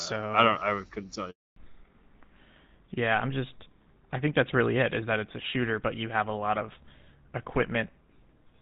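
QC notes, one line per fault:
1.30 to 1.56 s, handover gap: the sound cuts out within a few tens of milliseconds and stays dead for about 260 ms before picking back up. The call was handed from one network to another, and no speech frames arrived while the new link came up. So there's nothing to decode or conceal, just a clean hole. Whatever was said in that window is gone for good.
1.56 s to the end, fallback to narrowband: right after the gap the call drops out of HD Voice, and everything above 4 kHz disappears. Before the switch the band reaches up to around 7 kHz, which fits AMR-WB at 12.65 kbit/s with only light codec damage. Afterwards the top end stops at 4 kHz, which points to GSM full rate at 13 kbit/s. The result is duller, boxier and rougher, with sibilants losing their edge.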